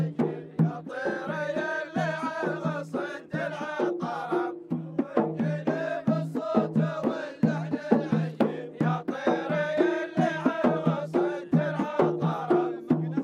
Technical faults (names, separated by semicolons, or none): none